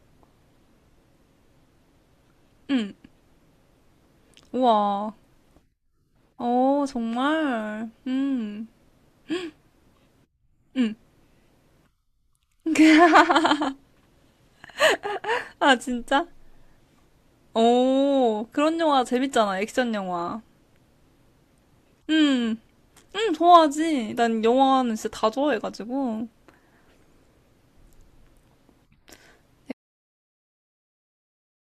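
At 29.72 s the speech cuts off into an audio dropout to silence lasting about 2 s to the end, likely a lost input or stray mute while recording continued. No room tone remains: the waveform flattens to silence and the spectrogram goes nearly blank.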